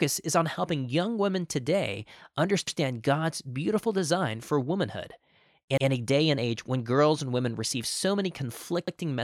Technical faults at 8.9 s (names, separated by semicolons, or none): overlapping chunks